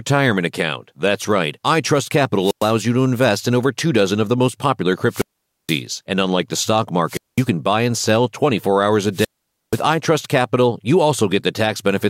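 Wireless microphone squelch dropouts occur at 2.37, 5.07, 7.07 and 9.12 s. Radio fades let hiss rise, then the receiver mutes the speech for 107, 474, 207 and 481 ms.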